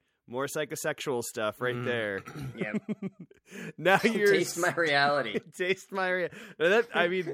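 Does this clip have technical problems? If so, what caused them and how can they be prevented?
No, the signal shows no technical problems, so there is nothing here that needs preventing.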